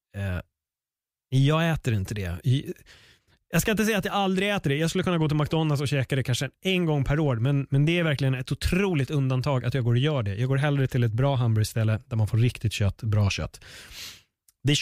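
No technical faults can be heard anywhere in this speech.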